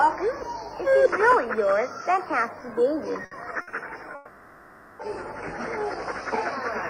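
At 3.25 to 3.34 s and again at 3.61 to 3.70 s, a burst of packet loss cuts out about 60 ms each time. The receiver stretches the last sound into a brief fading buzz or hiss, then the audio jumps ahead, too short to be a dropout. From 4.15 to 5.02 s comes a much longer gap, likely a network dropout. About 840 ms is never heard, and a concealment tail covers the whole stretch instead of decaying into silence, before the sound returns further on.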